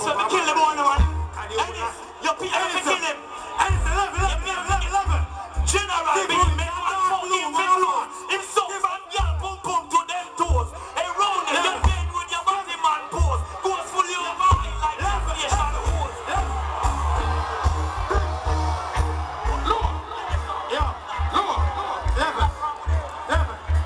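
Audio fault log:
Nothing to log here; I didn't hear a single problem anywhere in this audio.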